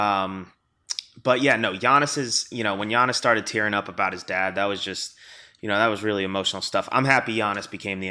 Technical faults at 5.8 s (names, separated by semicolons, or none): none